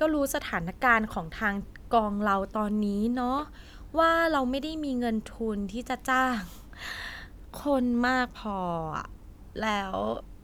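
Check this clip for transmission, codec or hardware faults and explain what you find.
No faults turn up in this clip.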